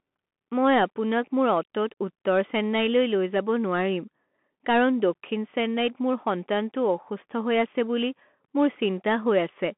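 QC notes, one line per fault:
Throughout, Bluetooth CVSD headset codec: the speech sits in a narrow telephone band, roughly 200 Hz to 3.4 kHz, with nothing above 3.8 kHz. The damage is plainly audible. A one-bit up/down coder, which fits a 64 kbps CVSD link, can't keep pace with fast, loud high content, so those moments smear and distort. S sounds come out scratchy, and the coarse stepping leaves a granular hiss under the voice.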